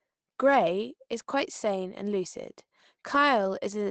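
Speech, with no technical faults to report.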